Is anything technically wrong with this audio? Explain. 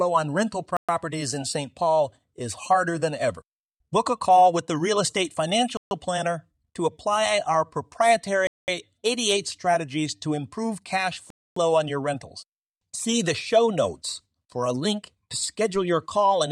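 Yes. Four dropouts sound like a Bluetooth stall, likely caused by interference delaying packets until the receiver buffer ran empty: silence at 0.77–0.89 s (119 ms), 5.77–5.91 s (140 ms), 8.47–8.68 s (208 ms) and 11.30–11.57 s (261 ms).

A DC step at 15.75 s shifts the waveform's zero line, heard as a low thump, with the offset then decaying as if through a 5 Hz high-pass.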